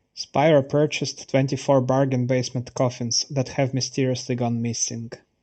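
Speech runs the whole clip with a hollow, phasey colour from channel delay (comb filtering). One channel arrives a fraction of a millisecond late, roughly 0.4 ms. When the two are summed to mono, shared content cancels at evenly spaced frequencies. The first notch falls around 1.5 kHz, with more repeating above it. The result is a hollow tone. It is steady from start to end. The audio also passes through an Opus call path limited to about 8 kHz.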